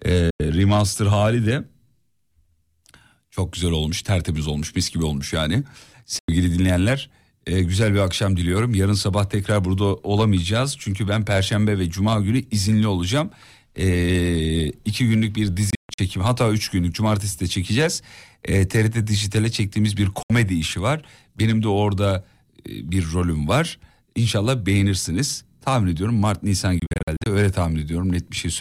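The speech cuts to silence five times, likely a Bluetooth dropout, where packets miss the headphones and are discarded. Holes fall at 0.30–0.40 s and 6.19–6.29 s (about 93 ms each), 15.70–15.99 s (broken gaps, longest 139 ms), 20.23–20.30 s (70 ms), and 26.79–27.26 s (many short gaps). Edges are abrupt or fade over a few milliseconds, and speech resumes as if it had played on.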